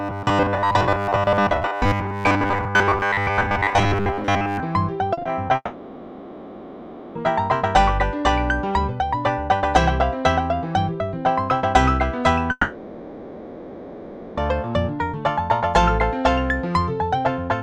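From 0.01 to 4.61 s the audio has a rigid, metallic buzz locked at 100 Hz, with the real sound only loosely traceable underneath. This is robotic sound from repeated short buffers. New audio was likely arriving too seldom, so the playback kept repeating roughly 10 ms chunks to fill the wait while most of the actual signal was skipped. A chunk repeating every 10 ms is what imposes the steady 100 Hz tone.

Between 5.13 and 5.51 s the sound turns choppy, with small pieces missing. This is repeated packet loss. Several gaps arrived in quick succession, the longest 40 ms, and each was patched by stretching out the preceding sound. About 100 ms of the 0.38 s stretch, roughly a quarter of it, is this patched-in material and not real audio.

Right after that, from 5.55 to 7.17 s, a sustained synthetic continuation replaces the audio for 1.6 s, with only about 30 ms of true silence near its end before the real audio resumes with that portion gone. 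The same long network dropout happens again from 12.51 to 14.39 s, where 1.86 s is filled the same way and ends in about 20 ms of silence. In both cases the cause is likely a long interruption in the incoming stream, during which the receiver kept extending the last sound it had.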